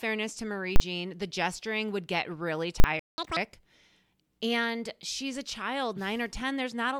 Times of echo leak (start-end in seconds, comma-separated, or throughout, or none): none